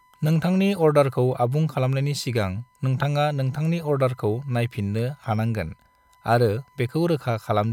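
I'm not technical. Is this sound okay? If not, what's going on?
No. All the way through the speech there is a faint, steady high-pitched whine sitting underneath, at a fixed pitch of 1 kHz, a bit like a test tone left running quietly in the background. This is USB whine. The USB connection draws power in quick bursts a thousand times a second, and that rhythm leaks into the audio through the power or ground wiring, turning into an audible tone.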